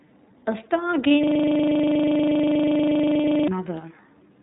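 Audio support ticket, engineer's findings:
Dull, band-limited sound throughout, nothing above 4 kHz, with a rough, slightly synthetic edge. iLBC codec: narrowband VoIP coding that codes each frame's excitation independently; damage is plainly audible. The character points to the 30 ms frame mode, which fits the 13.33 kbps rate. Affects the whole clip.

Brief held, buzzy vowel-like smear at 1.08–1.11 s, then clean recovery. Lost iLBC frames: one 30 ms packet missing, and the decoder filled the gap by repeating the last pitch cycle mixed with noise. Independent frames let the sound snap back immediately.

Second identical 30 ms concealment smear at 3.21–3.24 s. Lost iLBC frames again: one packet dropped and pitch-repeat concealment substituted, again recovering at once.

Rapid stuttering rattle at 1.24–3.48 s, one 40 ms fragment repeating exactly 56 times, a coarse buzz at 25 Hz. System hang loop: host or driver stalled while the audio hardware kept cycling the same ring buffer, and the 40 ms loop length reflects that buffer's size.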